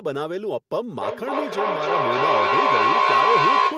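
From 1.0 s to the end of the clip the speech is joined by feedback howl. Two devices in the same room are on one call, and each trip from microphone to loudspeaker and back comes round louder than the last. The tone narrows to around 1 kHz and pulses roughly every third of a second, tracking the loop's delay. It peaks at about 8 dB above the speech and never breaks before the clip ends.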